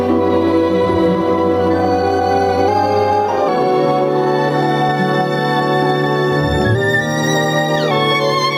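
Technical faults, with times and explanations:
Throughout, gain pumping: the level keeps ducking under each loud moment and swelling back up in the gaps, with quiet parts and background rising and falling by roughly 5 dB. That pulling-down on every loud sound, with loud and soft ending up closer together and a squashed feel overall, is most likely a fast limiter or compressor working hard against input gain that's set well too high for the mic.
2.68 to 3.48 s and 6.75 to 7.91 s, drift correction step: twice the audio suddenly runs 6.48% fast and jumps up by 109 cents, a little over a semitone, then drops back to normal speed and pitch. Speed and pitch move together, as they would if the playback rate changed in one go. That points to clock-matching software likely stepping its rate to drain a buffer, which is a gross correction compared with the tiny ones you'd normally expect.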